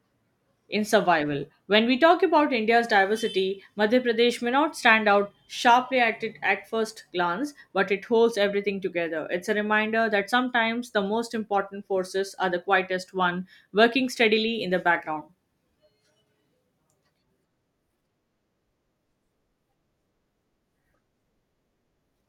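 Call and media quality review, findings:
No audible faults found in the speech on review; nothing to log against any component.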